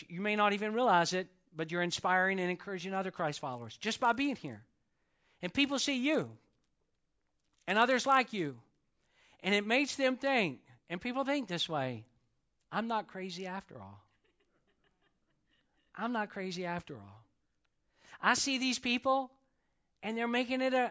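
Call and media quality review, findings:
Resampler restarted on every block, 3.53–9.54 s: steady 100 Hz buzz riding the speech, absent in pauses. Sample-rate converter reset at each 10 ms block edge, leaving a small edge error every block; the bandwidth points to a 16 kHz output stage.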